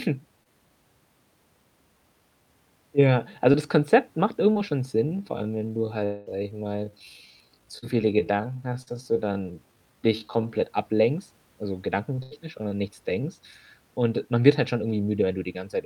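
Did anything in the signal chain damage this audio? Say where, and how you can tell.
Yes, most of the damage comes from the network path. Short concealed packet loss occurs at 0.43, 3.52, 4.52, 7.78 and 8.82 s. Each loses 20 to 40 ms of speech. The decoder patches the hole by extending the last sound, so you hear a brief smear or wobble.

The pace changes at 5.01 s and stays slow until 10.61 s, running at about 0.64 times normal speed. The pitch does not drop. Speech drags. This is a time-stretched section, likely from playback software repeating short pieces.

From 6.04 to 6.28 s, a fading buzz or hiss stands in for 220 ms of lost speech, then speech resumes further on. The concealment covers the whole gap, with no silence. This points to a long network dropout, likely a stall in packet delivery.

At 12.23 s there is a burst of packet loss. About 80 ms is missing. The receiver holds and fades the last sound until 12.33 s, then jumps ahead. 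The skipped speech never plays.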